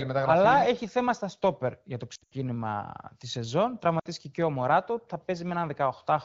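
It's a speech clip over AMR wideband (HD Voice), whose clean band-limited sound fits a rate around 15.85 kbit/s, and it has two spots of lost AMR speech frames. From 2.15 to 2.34 s, right after "στα στόπερ για το", the decoder loses 140 ms spread over 160 ms, with a longest run of 80 ms. It keeps repeating its last good pitch and vocal tract settings at falling gain, so the sound warbles and drops to near silence before recovering roughly. Then at 3.99 to 4.06 s, between "τη σεζόν" and "και ο", a 60 ms gap produces a shorter dip.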